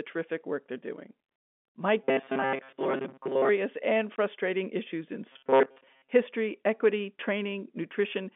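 From 2.04 to 3.50 s the speech turns into a rigid, metallic buzz at 134 Hz. This robotic sound likely comes from repeated short buffers of about 7.5 ms, replaying most of the audio.

At 4.16 s, just before "issues in", a hole of about 20 ms cuts the speech. This is packet loss filled with silence, which fits one lost packet.

From 5.32 to 6.12 s, right after "issues in", the same 134 Hz robotic buzz returns. The cause is again likely buffer repetition. All of this sits on narrow telephone-band G.711 audio.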